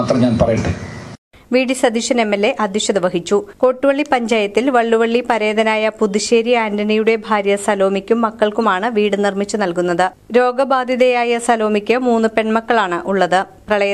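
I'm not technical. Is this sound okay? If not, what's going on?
No. At about 8.62 to 8.65 seconds there is a brief chirp or squeaky blip, over in a few hundredths of a second. This is a corrupt frame decoded. The audio is stored in small compressed chunks, and in a couple of these chunks some of the data got scrambled. The player played them anyway, so for that instant sound came out at the wrong pitches, which is what makes the sudden squeak.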